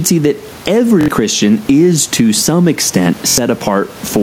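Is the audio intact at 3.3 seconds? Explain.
No. From 3.28 to 3.38 s there is a Bluetooth stutter. Data stopped arriving for about 93 ms, which fits roughly four lost packets, so the receiver kept replaying its last short buffer until fresh data came. The result is a brief buzzy, machine-gun rattle, after which the sound resumes further on, as if it had kept playing. On a waveform, one short segment repeats several times in a row. On a spectrogram, this appears as a run of identical narrow vertical slices.

Gain pumping is also present at this moment, as it is across the whole clip. The level swings by about 10 dB. Loud and soft parts end up closer in level, which squashes the dynamics. This is likely from gain set far too high, with a fast limiter pulling it back. On the waveform, the envelope looks flattened, with a raised floor in the gaps.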